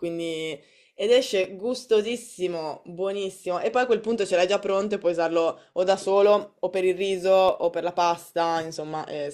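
A sharp tick at 1.44 s and another at 7.49 s are two blocks of digital silence, about 2.6 ms and 0.7 ms long. Each time, the output buffer was probably not filled in time and the sound cut out with no fade, so the hard edges click.

From 3.47 to 6.26 s, and again from 8.75 s to the end, the speech turns dull and gritty. This is a Bluetooth SBC bit pool drop, consistent with the link cutting the bit pool from 31 to 13, around 94 kbps. The upper sub-bands are starved, and what remains is coarsely quantised.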